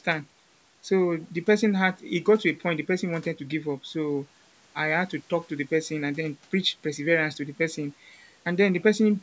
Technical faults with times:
none

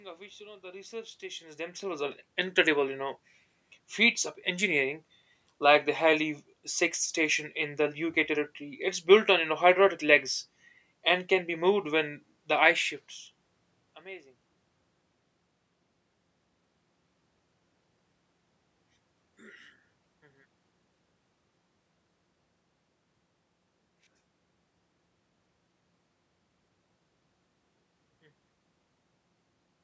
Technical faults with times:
none

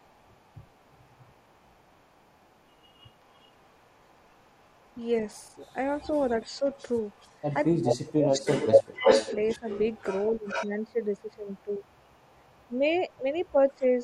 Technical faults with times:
0.00-10.67 echo leak
6.00-6.63 speech suppressed in double talk
7.68-9.67 speech suppressed in double talk
10.30-11.84 speech suppressed in double talk
11.51-13.51 echo leak
12.68-14.04 speech suppressed in double talk

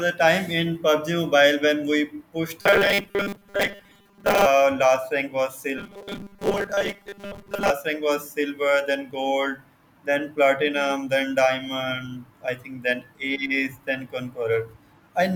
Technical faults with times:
2.61-4.46 robotic sound from repeated short buffers
5.78-7.70 robotic sound from repeated short buffers

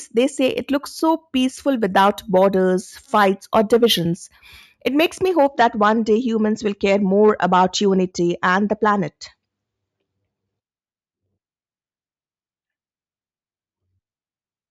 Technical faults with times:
0.00-5.48 imaging from sample-and-hold upsampling

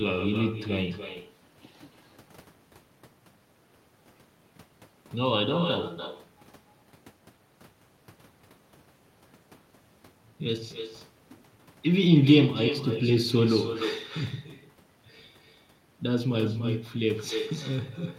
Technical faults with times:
0.00-18.18 echo with no canceller

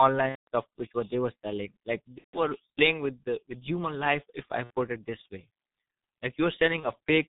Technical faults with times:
0.00-7.28 G.723.1 codec
0.29-0.47 VoIP packet loss concealed by the speech codec
2.18-2.40 VoIP packet loss concealed by the speech codec
4.64-4.70 VoIP packet loss concealed by the speech codec
6.80-6.85 VoIP packet loss concealed by the speech codec

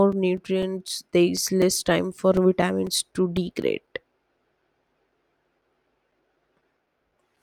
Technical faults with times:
0.12-7.37 periodic USB or driver dropouts

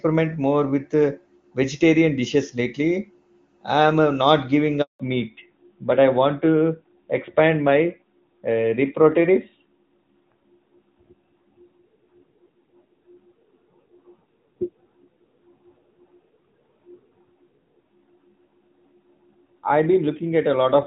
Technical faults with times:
4.82-5.00 handover gap
5.00-20.86 fallback to narrowband

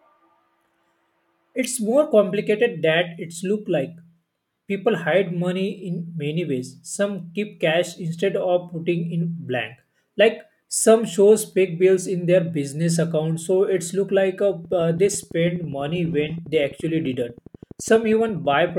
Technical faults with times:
14.65-18.70 train of clicks

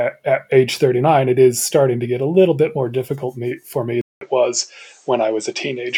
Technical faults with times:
4.01-5.97 input switched to a poorer device

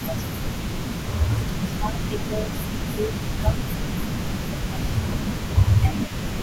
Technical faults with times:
0.00-0.86 speech suppressed in double talk
0.00-6.42 echo leak
1.36-3.15 speech suppressed in double talk
3.42-5.35 speech suppressed in double talk
5.81-6.42 speech suppressed in double talk

